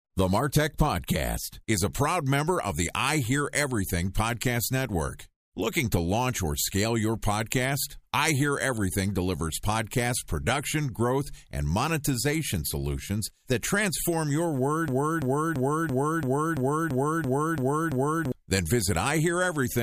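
At 14.88 s, after "solutions that transform your", a broken-record loop begins: a 0.34 s fragment repeats exactly ten times until 18.32 s, likely a stalled stream resending its last buffer. Waveform and spectrogram show identical blocks tiled every 0.34 s, and the intended speech is lost.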